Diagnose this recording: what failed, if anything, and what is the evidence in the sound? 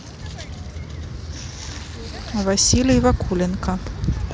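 Nothing in the recording stood out as a failure on listening.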